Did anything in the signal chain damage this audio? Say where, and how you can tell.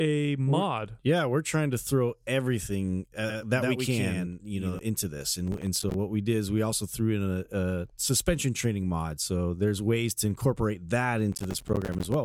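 Yes. A doubled audio track runs from 3.29 to 4.79 s. A second full-band copy trails the speech by about a tenth of a second, roughly 5 dB quieter, with no room colour, and starts and stops abruptly. The likely cause is a slower capture or routing path recording the same signal twice.

Processor overload crackle appears at 5.47 to 5.94 s and again at 11.32 to 12.14 s. This is a driver or buffer stage fault. Strings of tiny hard-edged silent dropouts, consistent with missed buffers of around 5 ms, form a gritty tearing that stops once the load eases.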